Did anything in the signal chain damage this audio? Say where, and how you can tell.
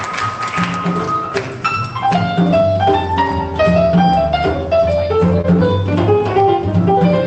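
Yes, there's short concealed packet loss at the network stage, around 5.41 to 5.46 s. You hear a brief smear where roughly 20 ms of audio never arrived in time. The receiver covered the gap by extending the preceding sound for about 22 ms, then crossfaded back into the real signal.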